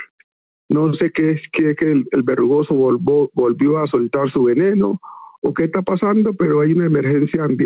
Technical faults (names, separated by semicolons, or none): gain pumping